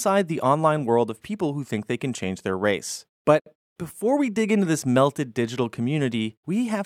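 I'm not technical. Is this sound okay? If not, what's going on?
No. There's a gap at a join of encoded pieces at about 3.40 seconds, lasting roughly 64 milliseconds, until 3.46 seconds. The speech seems to have been compressed in separate chunks and then stuck together without trimming. Each chunk carries a sliver of built-in silence at its edges, and that leftover silence stays in, so the speech briefly drops out with sudden, slightly softened edges, then resumes exactly where it left off.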